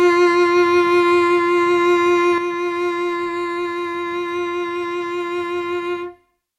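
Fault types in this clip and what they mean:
Sudden gain jump: at 2.38 s the music drops by about 6 dB in a single step and stays there to the end, with the background noise falling along with it. The likely cause is a gain setting or bit shift applied instantly, without a ramp.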